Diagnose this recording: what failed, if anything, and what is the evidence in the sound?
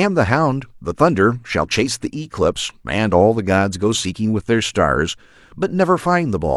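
Nothing here points to a failure at any stage of the chain, and I don't hear anything in this speech recording that needs tracking down.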